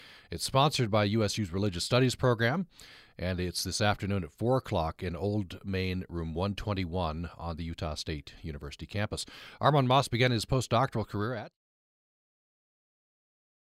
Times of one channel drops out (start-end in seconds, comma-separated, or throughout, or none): none